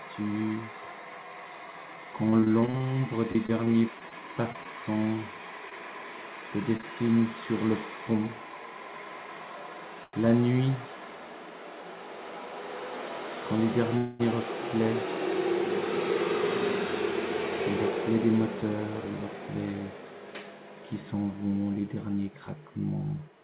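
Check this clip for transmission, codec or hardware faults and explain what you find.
Four transmission faults are audible, all typical of a call path; the band stops at 4 kHz, which fits a G.711 mu-law line.

Repeated packet loss (robotic sound), 2.3–6.84 s: packets keep dropping out, each hole patched by extending prior sound, leaving choppy audio with short gaps up to about 41 ms.

Short stall from a late packet, 10.04–10.23 s: one packet arrived late, so the receiver stretched the last sound about 95 ms; a sound hangs too long, nothing lost.

Call audio freeze, 13.97–14.21 s: the sound halts into a fading buzz for about 222 ms, then resumes where it stopped, likely from delayed packets draining the jitter buffer.

Jitter buffer speed-up, 18.09–19.81 s: to shed excess buffered delay, pitch-period slices totalling roughly 0.2 s were cut, so audio runs about 11% fast at unchanged pitch, sounding hurried.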